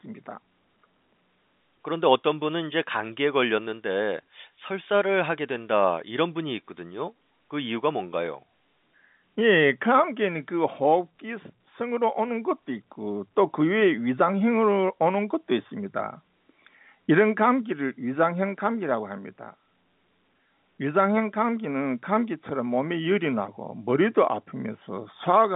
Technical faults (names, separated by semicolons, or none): none